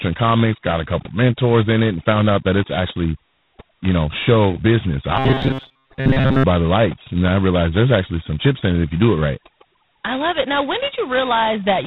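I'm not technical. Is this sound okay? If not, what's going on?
No, it has three problems.

The first runs through the whole speech clip: overdone noise removal. A noise-cleaning tool was pushed too hard, so the background is close to dead silence with little twinkly specks in it. The tool also scrapes away quieter parts of the voice along with the noise.

The second also runs the whole way: G.726 ADPCM, an old telephone-style coding squeezed down to its lowest setting. It stores each tiny slice of sound as a rough guess of how it differs from the last one, and at this setting the guesses are crude. That leaves a harsh, rasping hiss riding on the voice that gets louder when the speech does. It also cuts off everything above about 4 kHz, so there's no crispness or air at the top.

The third is short, from about 5.17 to 6.44 s, right after "you know show business" and before "by the lights": robotic sound from repeated short buffers. 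For that stretch the voice turns into a stiff, metallic buzz at around 133 Hz. Most likely the playback ran out of fresh audio and kept looping the last sliver, about 7.5 ms long. Most of that section is repeats, and that steady looping is what makes the fixed buzzy pitch.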